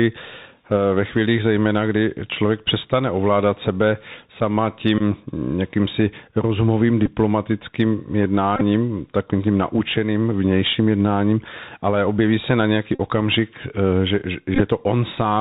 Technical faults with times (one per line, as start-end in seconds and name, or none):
0.00-15.41 Bluetooth CVSD headset codec
4.98-5.02 Bluetooth headset packet repeated
7.06 Bluetooth headset packet repeated
8.56-8.62 Bluetooth headset packet repeated
12.95-13.00 Bluetooth headset packet repeated
14.55-14.61 Bluetooth headset packet repeated